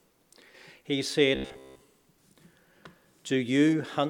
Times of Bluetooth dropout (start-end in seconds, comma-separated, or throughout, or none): none